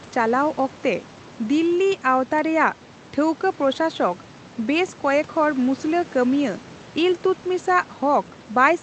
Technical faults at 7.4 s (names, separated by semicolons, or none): none